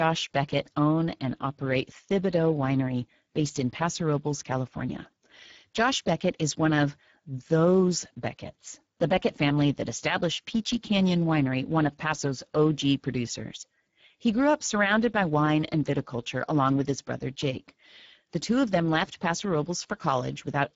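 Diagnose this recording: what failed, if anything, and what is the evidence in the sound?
The codec stage failed: the speech was carried through the Speex codec at a low quality setting, and the damage is plainly audible for the whole clip. Starved of bits for the CELP excitation, voiced sounds turn hoarse and noisy, which points to a bitrate near 10 kbps. Nothing survives above 7.7 kHz, and the upper band below that cut-off sounds like shaped noise rather than real detail.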